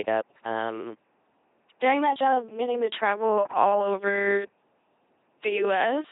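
From start to end, the speech passes through an LPC-10 vocoder. Nothing survives above 3.8 kHz. The damage is heavy. Each moment is rebuilt from a small all-pole filter, excited either by a pulse train or by noise. Nothing in between is allowed. So voiced sounds turn into a flat, mechanical buzz, like a robot voice. Where the voiced or unvoiced choice goes wrong, buzz and hiss swap places. The coarseness fits a bitrate near 2.4 kbit/s.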